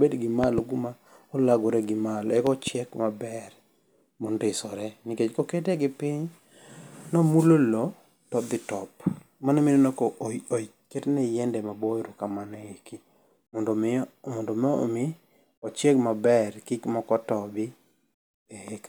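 At 0.44 to 0.61 s and again at 2.47 to 2.70 s, a loud pop lands on the speech, each time as two sharp thumps in quick succession, the first pair peaking about 15 dB above the speech and the second about 10 dB. A sudden electrical step was likely added to the signal, from a plug, switch or static discharge. On a waveform each shows as tall spikes; a spectrogram shows thin vertical broadband streaks across all frequencies, while the speech continues underneath.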